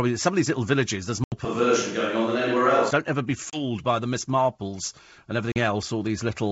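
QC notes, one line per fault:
1.24–1.33 s, 3.50–3.64 s, 5.52–5.58 s, packet loss on an ADPCM call: abrupt silent holes of 80, 30 and 40 ms, then brief distortion while the decoder's predictor and step size resync.
1.45–2.91 s, switch to a distant microphone: sound abruptly turns roomy and hollow, bass thins, faint room noise appears, level barely shifts; likely the close microphone dropped out.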